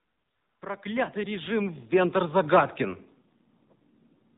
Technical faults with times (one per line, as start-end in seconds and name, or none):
0.00-4.38 AMR narrowband mobile codec
0.82-2.80 automatic gain rising